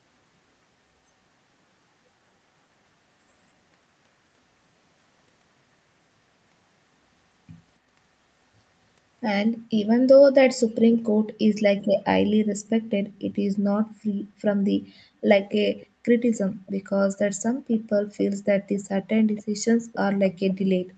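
From 9.53 to 9.77 s, 11.12 to 11.36 s, 12.55 to 13.24 s and 14.17 to 15.24 s, the room background drops sharply, by about 40 dB at its deepest, then recovers. This is background gated by the echo canceller. While far-end audio played on the loudspeaker, the canceller suppressed the microphone hard, so the ambience drops out. Each dip lasts from a fifth of a second to under a second and ends once the canceller releases.

From 15.49 to 17.19 s, a faint second copy of the speech trails the original by 275 ms, sitting about 25 dB below it. This is echo leak. The likely cause is that the far-end side's echo canceller did not fully remove its loudspeaker pickup, so part of it was sent back. Within that stretch, at 16.5 to 16.64 s, the background gates again, briefly, by about 38 dB.

At 17.7 to 17.89 s, there is one more short gated dip of about 40 dB. From 18.17 to 19.97 s, the echo returns at the same 275 ms delay and is stronger, about 20 dB below the speech. 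The audio is band-limited at 8 kHz throughout, consistent with the Opus call path.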